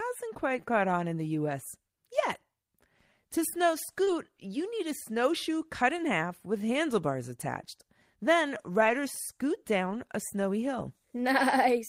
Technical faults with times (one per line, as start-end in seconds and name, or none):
4.03-4.09 short concealed packet loss
4.07 lost packet rebuilt from error correction